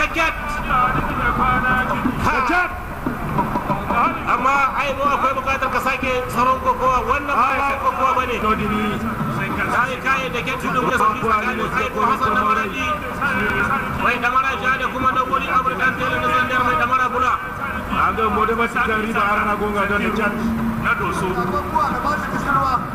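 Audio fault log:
0.7–1.1 s, 7.5–7.7 s, 10.6–11.0 s, 13.4–13.6 s: chunks out of order. The sound is cut into 100 ms pieces, and one piece plays late. At 0.7 s and 10.6 s it lands three pieces behind its place. At 7.5 s and 13.4 s it lands one behind. Nothing goes missing. The order is scrambled, so each spot sounds briefly jumbled. Each event has three abrupt joins.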